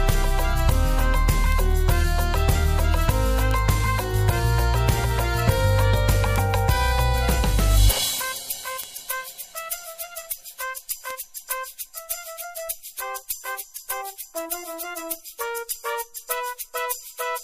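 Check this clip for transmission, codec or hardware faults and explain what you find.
Five isolated sharp ticks stand out, at 1.52, 3.51, 6.36, 8.84 and 11.11 s, each a bright, broadband click with no connection to the surrounding sound. These are bit error spikes: a single flipped bit in a stored or transmitted sample throws its value off by a power of two for one sample (two at 11.11 s) before it snaps back. The peaks reach about -7 dBFS, about -1 dBFS at 6.36 s, and about -13 dBFS at 11.11 s.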